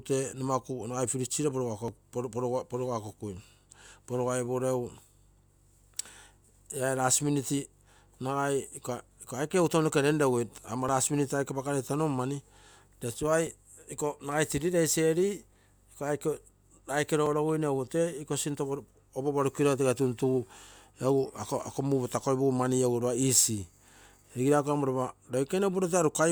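At 1.88, 10.89, 13.47 and 17.26 s the speech jumps abruptly, the likely sign of a dropped buffer (overrun). Samples were overwritten before being read, and the surrounding audio was spliced together, skipping roughly 10 ms at the first and last points and about 5 ms at the other two. Unlike an underrun, which leaves a brief silent gap, nothing is inserted here.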